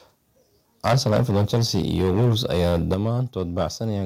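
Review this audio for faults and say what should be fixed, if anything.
From 0.85 to 3.1 s the speech has a harsh, crackly edge, with peaks flattened about 14 dB past the ceiling and roughly a tenth of samples clipped. That's likely microphone overload. The input gain is too hot for the converter. A milder patch at 3.38 to 3.66 s, about 2 dB over with around 1% clipped, likely has the same cause.

At 0.88 s the level drops about 2 dB in one step, and at 2.94 s it drops about 7 dB. Voice and background fall together, so this is likely a microphone volume step-down. The call software is reacting to the clipping by lowering the input gain.

Set the microphone input lower from the start, so peaks sit well under full scale and the software never has to step it down.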